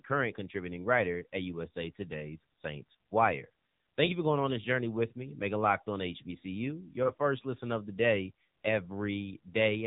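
From start to finish the speech carries the AMR narrowband mobile codec sound. Nothing reaches above about 3.8 kHz, and the voice is rebuilt by a vocal-tract model fed by sparse pulses, leaving it plainly buzzy and synthetic. That degree of damage fits one of the lower AMR-NB modes, around 7.4 kbps. A simple low-pass filter would only dull the top end. Here the voice itself sounds artificially resynthesised.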